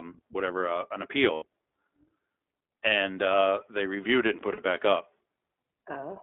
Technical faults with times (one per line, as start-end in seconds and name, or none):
0.00-6.23 iLBC codec
1.34-1.44 lost iLBC frames
4.39-4.42 chunks out of order
4.54-4.59 lost iLBC frames